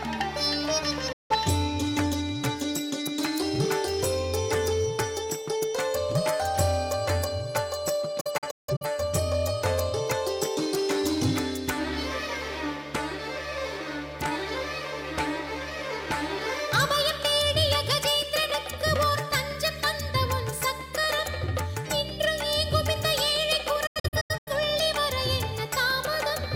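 A digital broadcast dropout occurs three times. The receiver lost frames and muted until clean ones returned, with quick 8 ms fades at each edge. At 1.12 to 1.36 s, a single 170 ms hole appears. At 8.21 to 8.86 s, about 300 ms of sound drops out in several holes across 0.6 s, the longest 170 ms. At 23.86 to 24.51 s, 340 ms is lost in shorter holes, none over 85 ms. The sound in the gaps is gone.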